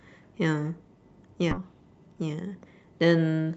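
At 1.51 to 1.62 s the speech skips ahead: roughly 0.7 s of audio, already queued behind later packets, was discarded, and playback joins the two sides almost seamlessly. Unlike a dropout, there is no silence or fill, only a missing stretch.

From 2.08 to 2.56 s, and again from 3.38 s to the end, a jitter buffer speed-up trims pitch-period slices to shed excess delay. The speech runs about 11% fast, then about 17% fast, at unchanged pitch. It sounds hurried rather than abruptly cut, as a skip would be.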